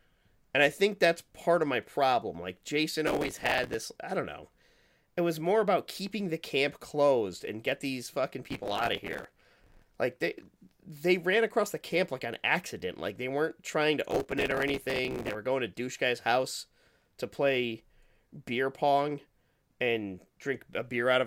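Speech marred by three bursts of gritty, tearing crackle at 3.07–3.74 s, 8.46–9.82 s and 14.11–15.35 s. This is processor overload crackle: buffers of around 5 ms repeatedly miss their deadlines, each filled with stale audio, dozens to about a hundred misses per burst.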